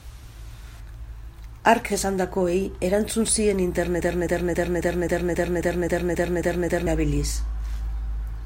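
A likely stall in the player, encoder or stream at 4.01 s left it resending the last fragment it held, producing a broken-record loop that runs until 6.87 s. The same 0.27 s slice of speech plays back to back eleven times, identical each pass, so the voice stutters mechanically on one fixed sound. Whatever should have been heard during those nearly three seconds is gone.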